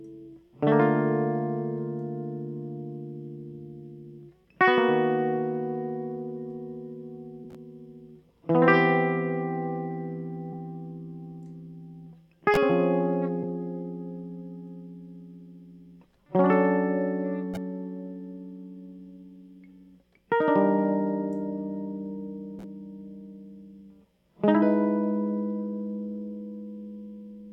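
A music clip with compressed frames skipped at 7.43 s and 13.42 s. Each time, the music jumps forward by roughly a tenth of a second. That fits about four 23.2 ms frames lost or rejected by the decoder.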